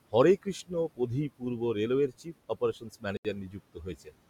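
Throughout the speech, noise suppressor artifacts shape the background. The room noise, sitting about 17 dB below the voice, is pulled down by about 18 dB whenever the suppressor judges a band to be steady noise, so it sinks in the pauses and swells back under the words. Unlike plain room noise, this pumping follows the speech moment by moment.

From 1.29 to 1.61 s comes the first stretch of speech cut by the noise suppressor. It mistakes quiet parts of the speech for background and turns them down by as much as about 17 dB, for roughly a tenth of a second in total. The affected parts sound swallowed and faint while the surrounding speech stays present. A longer patch follows from 2.08 to 3.05 s, with drops of up to about 19 dB spread over roughly a third of a second. Here too the sound fades rather than stopping outright.

At 3.17 s a Bluetooth stall, or likely so, leaves 77 ms of true silence before the sound resumes at 3.25 s. 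Packets held up by interference would let the headphones' buffer run dry. What sets this apart from the suppressor's cuts is the complete dropout: the background vanishes along with the speech, instead of the speech merely thinning while the noise floor flutters on.

From 3.48 to 3.87 s the suppressor again eats into the speech. It drops quiet portions by up to about 18 dB over roughly a fifth of a second, leaving them muffled and faint.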